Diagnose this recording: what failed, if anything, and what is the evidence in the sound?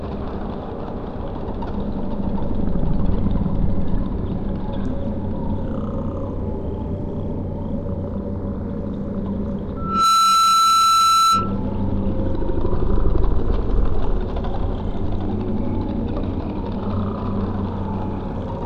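A microphone-to-loudspeaker loop in the analogue path exceeded unity gain: a loudspeaker feedback squeal at 1.3 kHz swells within a fraction of a second from 9.76 to 11.60 s, roughly 5 dB above the sound.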